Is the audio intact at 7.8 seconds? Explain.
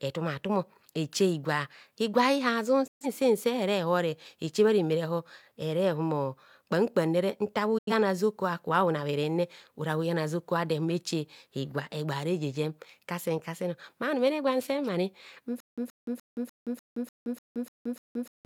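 No. After "nta bhu", a digital broadcast dropout silences 7.78 to 7.92 s. The receiver lost frames and muted, cutting the speech with a quick 8 ms fade.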